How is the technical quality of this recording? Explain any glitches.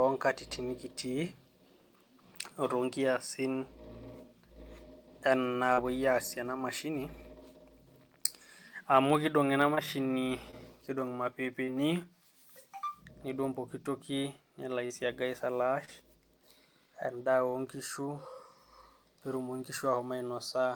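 The recording has six short concealed packet losses, at 5.73–5.91, 9.75–9.79, 10.51–10.54, 11.64–11.71, 14.86–14.92 and 15.85–15.89 s. Each time, 20–40 ms of the speech stream arrived too late, so the receiver continued the preceding sound and blended back, leaving a brief smear or wobble, slightly stretched at 5.7 and 11.6 s.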